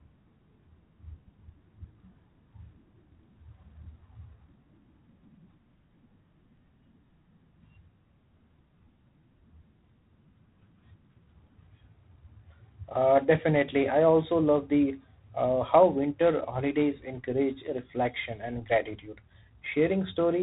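From start to finish the speech carries G.726 ADPCM damage: a harsh, rasping hiss that swells and fades with the speech level. The codec codes each sample as a small difference from an adaptive prediction, and with so few bits the quantising error stays loud, which fits the 24 kbit/s mode. On a spectrogram everything stops at a hard ceiling near 4 kHz, and a grainy noise floor fills the band under each syllable.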